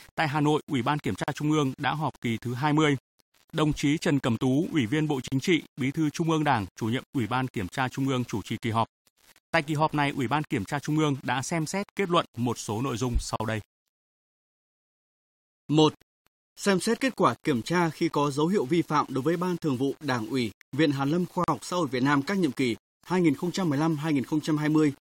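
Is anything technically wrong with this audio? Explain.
Yes, there are two faults. Throughout the speech, quiet passages and word tails sound gritty and grainy, with distortion that follows the voice and noise sitting roughly 30 dB below it. This is likely low bit depth without dither: rounding to only about 7 bits, with no dither to decorrelate the error, ties the distortion to the signal.

At 1.24, 5.28, 9.32, 13.36, 17.40 and 21.44 s, every 4 s, the speech drops out for about 40 ms with smeared edges, then resumes where it stopped. This is a gap at a join of encoded pieces: separately encoded segments were joined with each one's start-up delay and end padding left in.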